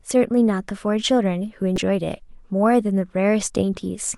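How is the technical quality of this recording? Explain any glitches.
The recording has one glitch in the speech. From 1.74 to 1.78 s there is a burst of damaged data in the compressed stream. Part of the encoded data there is corrupt. The decoder cannot read those frames properly. It loses sync and hunts for the next valid frame header. For about 40 ms the speech breaks up. The voice then picks up again.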